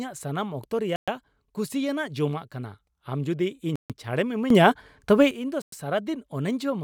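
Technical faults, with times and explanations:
0.96 s, 3.76 s and 5.62 s, Bluetooth stall: Each dropout is most likely radio interference delaying packets on the wireless link, so the headphones' small receive buffer empties before the retransmissions arrive. With nothing to play, output stops outright. The speech cuts to silence for about 0.12 s, 0.14 s and 0.11 s respectively, then resumes. The gaps are clean holes in the audio, not fades, which is what a starved playback buffer sounds like.
4.50 to 5.31 s, sudden gain jump: Here a digital gain change was applied instantly from one sample to the next, with no ramp, likely a level setting or bit shift taking effect abruptly. For about 0.8 s the whole signal sits about 12 dB higher, and the background noise rises with the speech because both pass through the same multiplier. At 5.31 s the level drops back just as abruptly, so this section stands out as a step up in loudness with hard edges.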